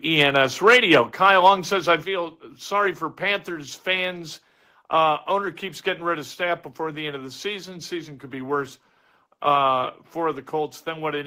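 From 0.67 to 0.95 s the speech peaks flatten and crackle harshly, by about 6 dB over full scale, likely microphone overload with the converter clipping the tops, unlike codec distortion. At 1.02 s the level drops abruptly by about 4 dB, background included, likely the microphone volume being stepped down in one jump, not a gradual fade. Milder clipping, about 2 dB over, returns from 1.25 to 1.5 s before "says I", and after "says I" at 2.04 s a second step cuts the level about 5 dB before "sorry for".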